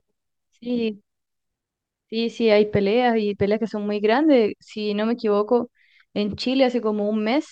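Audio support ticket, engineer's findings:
Nothing stood out on listening; no findings to log against this speech clip.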